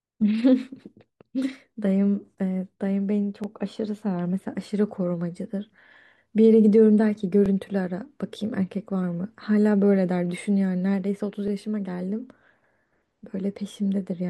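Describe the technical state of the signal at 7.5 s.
At 7.5 s the signal has an overlapping chunks fault. It runs from 7.46 to 7.48 s. The speech was handled in blocks of 4 s, and the next block began before the previous one had finished. At this join, a 20 ms slice of audio is played twice in a row. That doubled slice is heard as a brief stutter or click in the speech, sitting right at the boundary between the two blocks.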